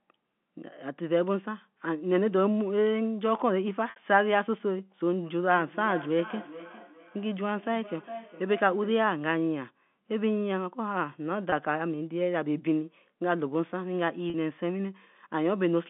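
At 3.9 s the speech briefly sticks on a held, buzzy tone for about 60 ms before carrying on. The same small stutter returns at 11.5 s for 20 ms and at 14.3 s for 40 ms. This is packet loss with pitch repetition. Audio went missing, which fits three, one and two 20 ms packets, and the receiver looped the last pitch period to bridge each gap.

From 5.54 s to 9.1 s, each phrase comes round again about every 0.4 s, thinner and more ringing on every pass, with the loudest repeat about 15 dB below the speech. This is feedback echo between two devices. A second device in the room replays the call through the narrow telephone band, and the first microphone picks that sound up again, where neither echo canceller removes it.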